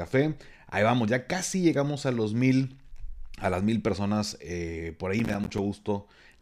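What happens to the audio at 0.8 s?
Nothing goes wrong at 0.8 s; the speech there plays through intact, with no dropout, click, distortion or other fault.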